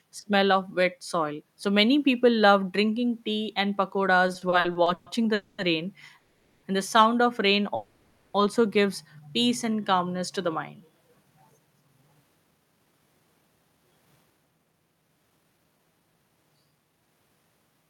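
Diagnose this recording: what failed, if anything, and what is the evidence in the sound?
Repeated stalls (stutter) between 4.27 and 5.09 s come from the network and jitter buffer. The speech breaks eight times, the longest hold about 120 ms, and about 310 ms is filled with continued sound. No content is lost, but the passage drags and stutters.

There are three call audio freezes, at 5.34–5.61 s, 6.18–6.66 s and 7.75–8.37 s. They last 240, 450 and 590 ms. The last sound continues as a fading buzz and never drops to silence, then the speech resumes where it stopped. The likely cause is packets held up in the network, with each freeze adding its length to the delay.

A jitter buffer slow-down at 9.48–9.82 s plays the speech at 87% speed with the pitch unchanged. The receiver repeated pitch periods to add about 55 ms of reserve, so the sounds are drawn out.

A jitter buffer speed-up from 11.09 s to 17.44 s runs the speech at 113% speed with the pitch unchanged. 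The receiver cut short pitch-period pieces to shed the delay built up earlier, about 0.7 s in total, and the speech sounds hurried.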